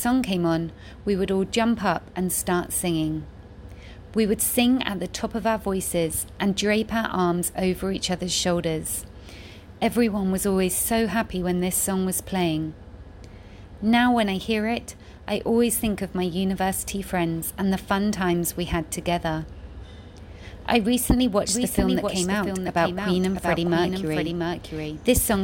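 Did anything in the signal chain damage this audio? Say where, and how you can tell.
Yes, a doubled audio track from 21.49 s to the end of the clip. At that point a second full-band copy of the sound appears abruptly, trailing the original by roughly 0.7 s and a few dB quieter. It carries no decay or room colour, so it is not an echo. The stage is likely playback or storage, where a slower capture path or a misaligned edit mixes in a second, out-of-step copy at a fixed offset.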